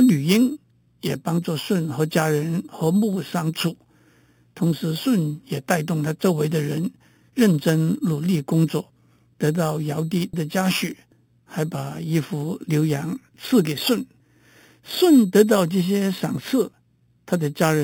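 A bright, metallic fizz rides on top of this speech clip from start to finish, rising and falling with the talker's level. It is imaging from sample-and-hold upsampling: each original sample was simply repeated to fill the higher rate, with no smoothing filter, so mirrored copies of the spectrum sit above the real band. The lowest copy spans 4 kHz to 8 kHz at about 18 dB below the signal, which fits 8 kHz material raised to 48 kHz.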